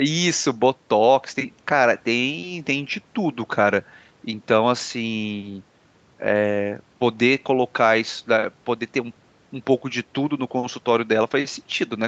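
Nothing stood out on listening to the speech, which carries the limited top end of a call path with nothing above about 8 kHz.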